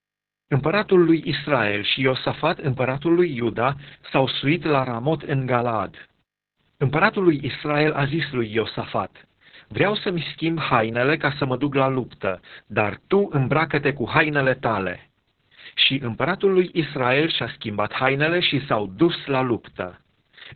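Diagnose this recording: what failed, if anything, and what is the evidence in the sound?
The failure is at the codec stage: Opus voice compression, applied to the whole speech clip. Nothing survives above 4.4 kHz, so the voice sounds muffled, hoarse and slightly robotic. A narrowband SILK coder produces exactly this. The coarse excitation fits a very low bitrate, around 6 kbps.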